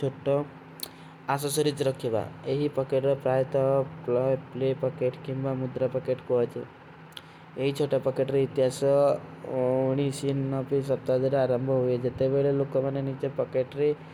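Speech recording, no technical faults detected anywhere in the clip.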